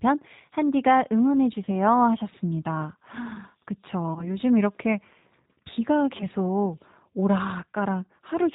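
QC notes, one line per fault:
Throughout: G.729 codec, at 8 kbit/s, with plainly audible damage. Speech is rebuilt from a vocal tract filter, pitch predictor and sparse pulses, so it sounds rough and slightly synthetic, with nothing above 4 kHz. Unlike plain band-limiting, the roughness comes from the coarse model.
1.65–1.69 s, 4.14–4.31 s, 6.17–6.24 s: VoIP packet loss concealed by the speech codec. About 20 ms of audio is missing each time, which fits a single lost packet. The decoder stretches the last pitch and filter into a fading buzz or noise instead of leaving silence, and the model takes time to recover, so the disturbance outlasts the gap, most at 4.14 s.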